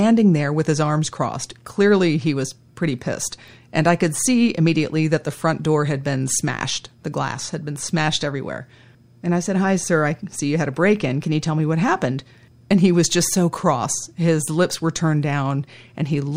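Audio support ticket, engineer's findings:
No audible faults found on the speech recording.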